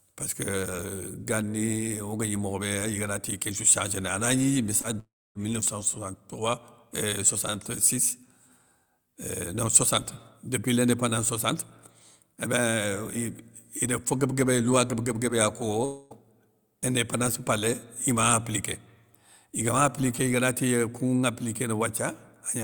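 At 4.81 s there is short concealed packet loss lasting about 40 ms. Roughly 20 ms of the speech never arrived in time. The receiver patched the gap by extending the sound just before it, then merged back into the real signal. The result is a brief smear or wobble rather than a clean break.

From 4.99 to 5.37 s the speech breaks off, likely a long network dropout. About 360 ms is missing. The last sound carries on as a fading buzz or hiss, then about 270 ms of near silence follows. The speech resumes with that stretch simply gone.

From 15.85 to 16.12 s there is a similar gap, likely another long network dropout. About 260 ms is lost. Here the filled-in continuation covers the whole hole with no silent stretch. The gap sounds like a smeared, decaying tail before the speech returns with the missing part skipped.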